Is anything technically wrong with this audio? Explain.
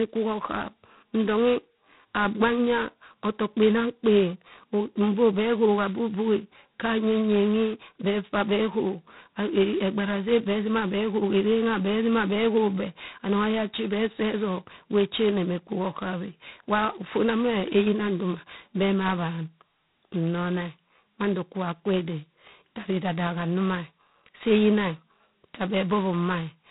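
Yes. G.726 ADPCM runs throughout: coarsely quantised prediction differences, consistent with 16 kbit/s, leave a harsh rasping hiss that follows the speech, and nothing above 3.9 kHz.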